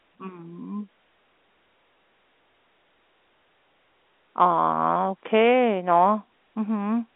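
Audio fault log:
No faults logged; the speech sits in a telephone band of about 300 Hz to 3.5 kHz with nothing above 3.8 kHz, as expected of G.711 A-law telephone coding, and any coding damage is faint at most.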